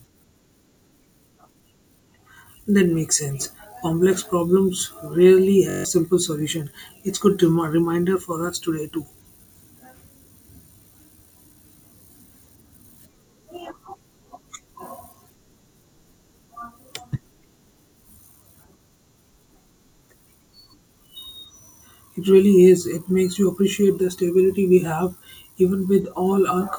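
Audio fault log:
5.70–5.85 s, system hang loop: between "problems rarely" and "simple solution", a single 21.33 ms slice of audio repeats exactly seven times. The audio path stalled while the output hardware kept replaying the same ring buffer, which fits a 1024-sample buffer. The identical repeats fuse into a hard, pitched buzz at about 46.9 Hz, and roughly 150 ms of speech is lost. A dropout would leave silence, and packet-loss concealment would fade or vary the repeated sound.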